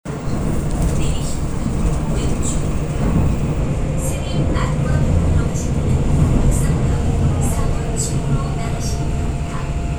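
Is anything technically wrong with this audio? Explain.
No, nothing here sounds technically off to me; the recording just runs along without anything catching the ear.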